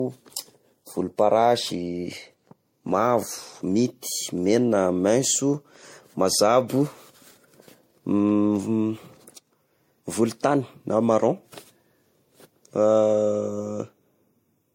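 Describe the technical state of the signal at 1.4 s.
At 1.4 s the speech carries generation loss, present throughout the clip. The likely cause is repeated lossy re-encoding, with the character pointing to around four passes through MP3 at about 64 kbit/s. Each pass quantised again on a shifted frame grid, so the noise and spectral gaps piled up. The result sounds swirly, smeared and hollow beyond what that bitrate alone would give, with blurred attacks and nothing above 16.5 kHz.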